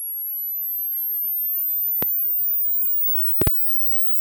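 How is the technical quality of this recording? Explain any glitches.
The recording has two loud pops. The first, from 2.03 to 2.05 s, is a single sharp hit. The second, from 3.42 to 3.49 s, is a quick double. Each peaks around 15 dB above the sound, which carries on underneath. A likely cause is a sudden voltage jolt from a plug, switch, static discharge or driver hiccup, which the following circuitry shapes into a thump.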